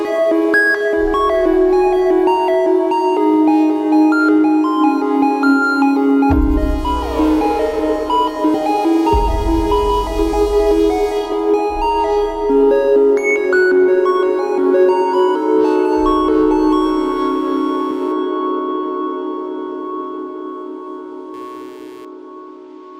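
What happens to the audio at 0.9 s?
Nothing goes wrong at 0.9 s; the audio runs through that moment intact, with no dropout, click or other fault.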